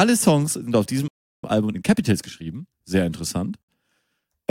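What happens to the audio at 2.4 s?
At 2.4 s the speech is in a time-compressed catch-up, running from 1.44 to 2.84 s just after "sind auf". The player drops and cross-fades small slices to clear a backlog, so delivery runs about 1.25 times fast. Unlike a plain speed-up, pitch stays normal.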